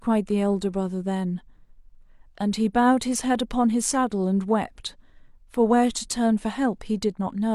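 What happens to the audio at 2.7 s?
At 2.7 s the speech carries on intact, with no dropout, click, distortion or other break in the sound.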